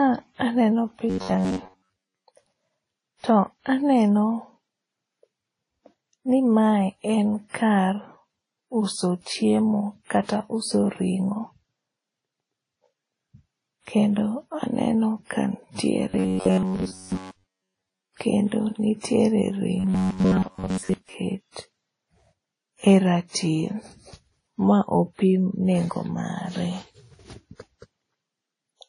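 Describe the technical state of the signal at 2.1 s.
At 2.1 s the speech is inside a stretch of robotic sound from repeated short buffers, running from 1.10 to 2.27 s. The likely cause is audio arriving too seldom, so the player loops a fragment of roughly 10.7 ms instead, skipping most of the real signal. That imposes a rigid 93.8 Hz buzz that loosely tracks the syllables. Unlike ordinary dropouts or clicks, there are no gaps, just a steady metallic pitch.

Underneath, and across the whole clip, is transcoding between lossy codecs. Nothing is present above 10.1 kHz, and two kinds of low-bitrate smearing sit on top of each other. The sound likely points to a WMA encode later re-encoded to Vorbis. A single codec would show only one artefact signature, not this layered, doubly degraded texture.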